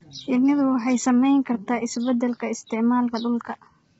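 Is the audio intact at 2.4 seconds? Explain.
No. At 2.4 seconds the speech carries low-delay AAC compression damage, present from start to finish. The cause is likely an AAC-ELD encoder: its short frames can't separate closely spaced harmonics well, so at a starved bitrate (the heavy damage fits roughly 16 kbps) noise fills the gaps between them. The voice sounds rough and grainy, and nothing survives above 7.8 kHz, leaving a dulled top end.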